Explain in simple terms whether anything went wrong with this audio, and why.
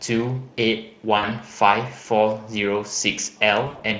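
Twice the speech briefly smears into a buzzy tone or a noise that fades: from 1.17 to 1.28 s, and again from 3.67 to 3.81 s, where two gaps bunch together. This is VoIP packet loss concealed by the speech codec. Bits of the stream went missing, and the Speex decoder covered each gap by stretching out the last sound it had and letting it fade.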